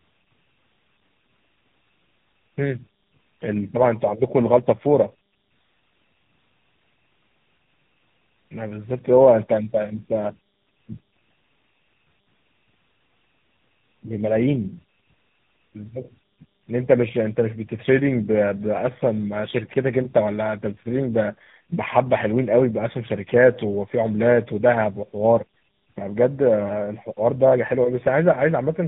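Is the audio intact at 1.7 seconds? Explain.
No. At 1.7 seconds, as across the whole clip, there's tandem speech coding: GSM full rate, then G.711, then AMR-NB at 10.2 kbit/s, so two speech codecs stack their damage. It sounds rough, muffled and warbly, with nothing above 3.8 kHz.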